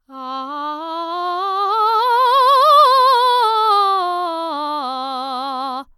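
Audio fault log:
No faults are present in this music clip.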